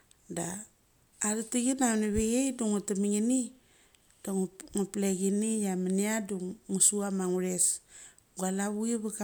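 Speech recording with no audible technical faults.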